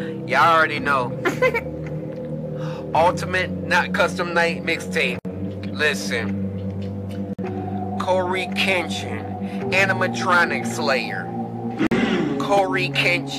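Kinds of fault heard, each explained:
Gap at a join of encoded pieces: separately encoded chunks were stitched together untrimmed, so encoder start-up delay and last-frame padding remain as brief silences of 60, 52 and 47 ms at 5.19, 7.33 and 11.87 s before the sound resumes where it stopped.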